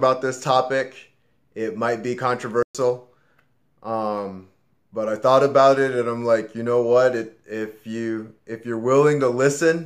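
At about 2.63 s there's a playback stall: the sound just stops mid-flow and sits in silence for roughly 120 ms, picking up again at 2.75 s. That's likely the player running dry of data or its thread getting blocked for a moment.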